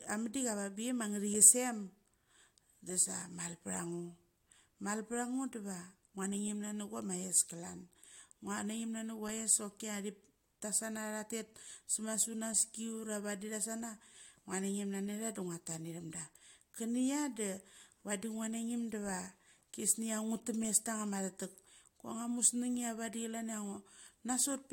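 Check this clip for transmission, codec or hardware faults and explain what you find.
No transmission, codec or hardware faults.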